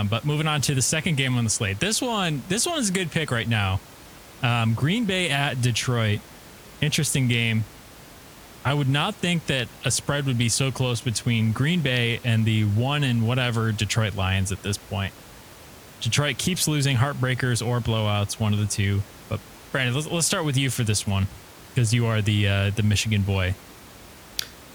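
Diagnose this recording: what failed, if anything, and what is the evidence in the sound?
Nothing in the signal chain seems to have failed here; the only thing to notice is the ordinary background noise of the room, sitting about 22 dB under the speech, which belongs to the recording itself rather than to any stage of the system.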